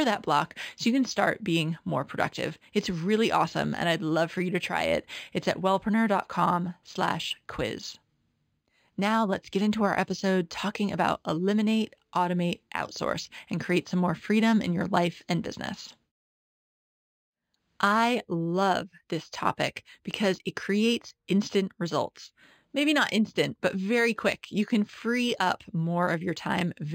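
Speech, and the whole clip carries imaging from linear upsampling. The top end sounds dulled, with a faint metallic shimmer riding on the sibilants. That pattern fits material at roughly 11 kHz that was brought up to 48 kHz by drawing straight lines between samples. That interpolation filters poorly, so a mirrored copy of the spectrum leaks through between about 5.5 kHz and 11 kHz, sitting around 25 dB below the speech.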